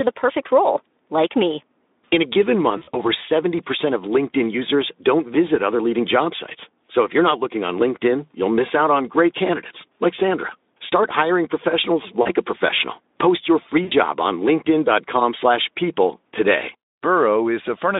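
At 2.77 s the speech breaks up with VoIP packet loss concealed by the speech codec: about 100 ms of audio is missing, scattered across 160 ms up to 3.08 s, with no single gap longer than 40 ms. The decoder repeats its last pitch and filter shape at falling gain. Unlike a hard dropout, the gaps become a fading buzz or coloured noise rather than silence, and the voice stays thin briefly afterwards. Shorter bursts follow at 12.21 s (40 ms) and 13.83 s (80 ms), over the narrowband Speex line.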